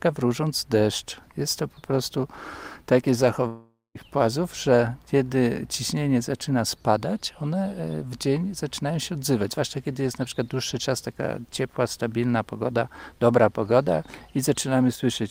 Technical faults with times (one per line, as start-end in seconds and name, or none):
3.47-3.98 long network dropout
14.96-15.03 one channel drops out